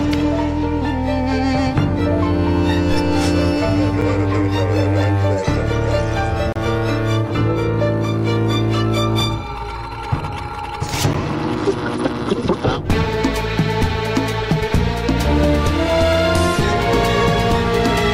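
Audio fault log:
4.01 s, 6.53 to 6.56 s, 11.13 s: block of digital silence. Sharp ticks at 4.01 and 11.13 s and a brief hole at 6.53 s, where the sound drops to silence for about 8, 32 and 11 ms with no fade. The 11.13 s gap fits a 512-sample buffer left unfilled.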